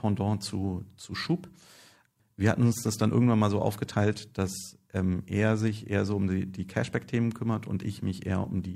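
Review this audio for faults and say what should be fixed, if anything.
Faint regular ticks run through the speech from 0.32 s to 8.27 s, about every half second. These are clock slip clicks. One sample is lost or repeated each time. The likely cause is two unsynchronised clocks drifting by tens of parts per million. Locking both devices to a shared word clock, or resampling between them, prevents it.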